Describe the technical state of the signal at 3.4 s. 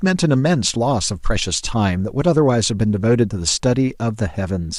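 At 3.4 s the speech signal is intact, with no audible technical fault at that moment.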